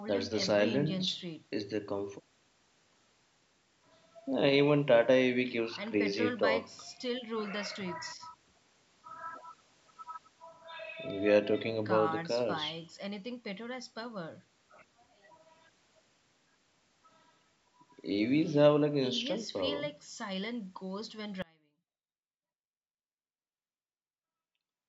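At 21.42 s the speech cuts out abruptly, and it stays gone to the end of the clip. This is an audio dropout to a faint residue. There is no fade. The sound drops in a single step. What remains is a faint trace, roughly 30 dB below the normal level. The path after the break stayed live, so the gap is not true silence. The likely cause is a loss of the wanted signal. The call's microphone processing is working normally, and its high-pass filter trims the lowest bass.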